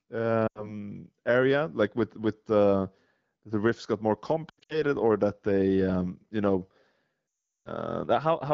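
Lost AMR speech frames show up three times in this wideband call audio. At 0.47 to 0.75 s, just before "area like with with", about 80 ms goes missing and the sound drops to near silence. Around 4.49 to 4.83 s, between "the riffs got more" and "or that they um", losses scatter over 200 ms and cause brief drops toward near silence. At 7.58 to 7.69 s the concealment runs longest, dropping to near silence within two frames.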